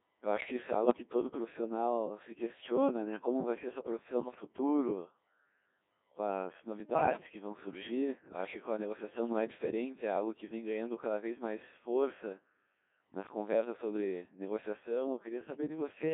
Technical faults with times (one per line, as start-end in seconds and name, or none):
0.00-16.14 Codec 2 vocoder
0.84-1.02 bit errors on digital voice radio
6.80-7.20 bit errors on digital voice radio